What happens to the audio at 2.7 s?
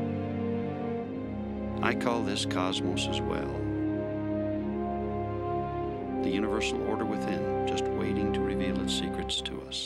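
Nothing goes wrong at 2.7 s: the audio plays through that point intact, with no dropout, click or other fault to be heard.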